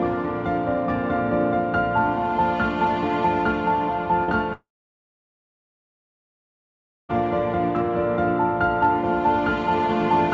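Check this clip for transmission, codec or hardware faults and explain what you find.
Two transmission faults appear, both typical of a call passing through a wideband codec that leaves nothing above 8 kHz.

At 4.24 to 4.31 s there is short concealed packet loss. About 40 ms went missing, and the receiver patched it by extending the preceding sound, leaving a brief smear.

From 4.53 to 7.12 s comes a long network dropout. The last sound fades briefly, then about 2.4 s of near-silence follows, likely from lost packets, before the audio resumes.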